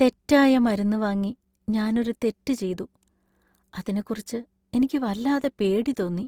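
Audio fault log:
throughout: Opus compression. The speech sounds grainy and rough, with hashy noise in place of fine high-frequency detail. The likely cause is Opus music mode at a rate fitting 24 kbps, filling starved bands with folded or noise content. Spectrogram: full bandwidth, but upper bands look speckled rather than holed.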